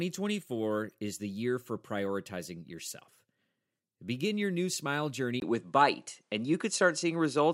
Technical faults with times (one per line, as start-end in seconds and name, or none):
5.40-7.54 input switched to a poorer device